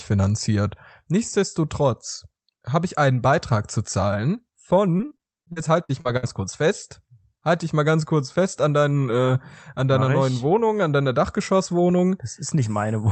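From 4.97 to 6.25 s, repeated packet loss (robotic sound): gaps of up to 57 ms are filled by extending the preceding audio, leaving choppy speech.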